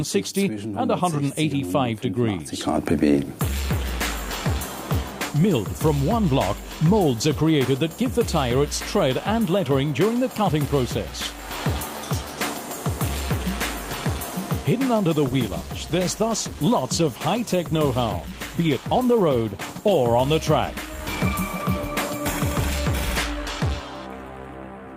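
From 15.23 s to 20.13 s there is a call bitrate drop: the bandwidth estimate fell and the encoder went from 64 kbps to 18 kbps, holding the lowest rate for 4.83 s. The coarser coding makes the sound rough, watery or muffled until the rate recovers.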